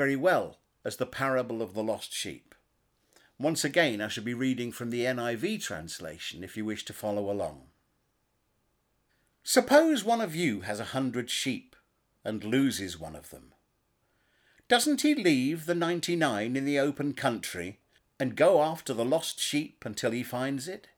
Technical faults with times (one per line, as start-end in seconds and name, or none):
none